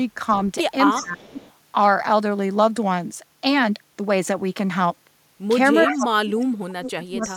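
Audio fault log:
0.91–1.03 s, 1.23–1.53 s, 5.78–5.94 s, 6.86–6.91 s and 7.22–7.33 s: echo leak. A delayed copy of the speech returns in short scraps, each trailing its source by 341 ms. Most scraps sit about 15 dB below the speech. The one at 5.78 s is loud, only about 5 dB down. The one at 6.86 s is faint, near 20 dB down. The likely cause is a far-end loudspeaker whose echo canceller let part of the pickup through and sent it back.
0.96–1.23 s and 5.85–7.36 s: speech suppressed in double talk. The speech sinks while the echoed sound overlaps it. The first dip is brief, about a third of a second, and drops around 20 dB. The second is far worse. It runs roughly a second and a half to the end, cutting nearly 35 dB at its deepest, so the speech nearly vanishes. Likely the echo canceller could not split the talker from the echo and turned both down.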